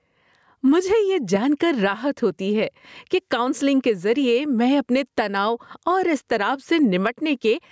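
A speech recording where the gain ducks by around 10 dB under each loud syllable, leaving the sound squashed throughout. This gain pumping likely comes from the microphone gain being set far too high, with a fast limiter clamping down on every loud sound. The call microphone processing shows in the trimmed low bass and nothing above 8 kHz.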